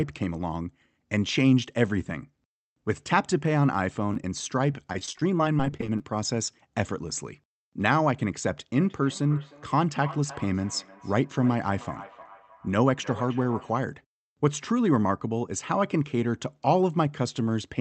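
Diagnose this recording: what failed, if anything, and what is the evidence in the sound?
Repeated packet loss (robotic sound) at 4.12–4.32 s and 4.72–6.00 s, a network fault: brief dropouts, up to 26 ms, get patched by stretching the preceding sound, leaving choppy, robotic speech.

Feedback echo between two devices at 8.8–13.86 s, a call processing failure: speech returns about every 0.3 s, at most about 17 dB below the talker, because a second device's playback re-enters the talker's microphone.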